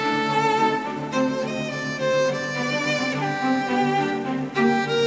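A bit of music that came through what sounds like a G.722 call path, topping out around 8 kHz as that codec does, and there's nothing technically wrong to point at.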